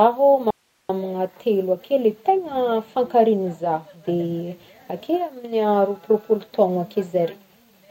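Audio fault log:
0.51–0.89 s, audio dropout to a faint residue: the speech cuts out abruptly for about 390 ms and returns just as suddenly. The gap is not silent but holds a thin hiss roughly 45 dB below the speech level. The hard edges on both sides set it apart from a natural pause or fade. The likely cause is a brief loss of the wanted signal while the path after the break stayed live, passing only its own noise floor.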